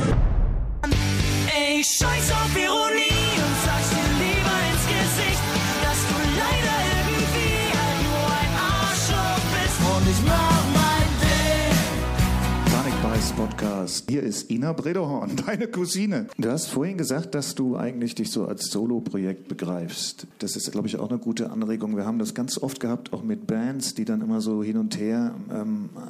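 No technical faults are audible.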